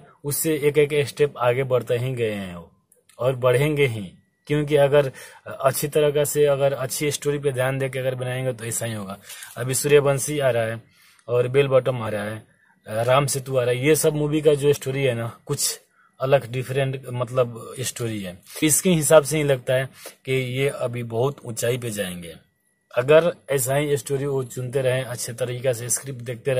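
At 12.03 to 12.08 s, 14.72 to 14.77 s and 18.59 to 18.63 s, the audio is broken by short bursts of damaged data in a compressed stream, each about 40 ms long. Corrupted bytes leave the decoder unable to read those frames, so it loses sync until it finds a valid frame header. The result is a brief chirp, squawk, click or short hole. A plain dropout would go silent instead.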